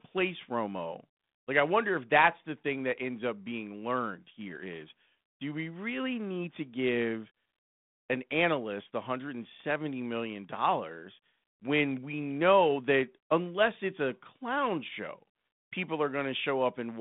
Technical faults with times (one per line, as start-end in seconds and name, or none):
none